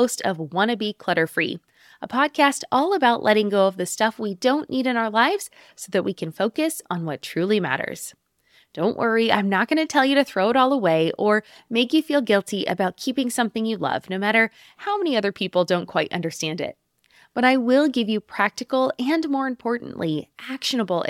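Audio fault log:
No faults found in this speech recording.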